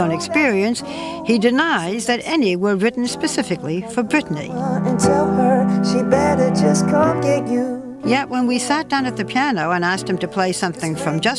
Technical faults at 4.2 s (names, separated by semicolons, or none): none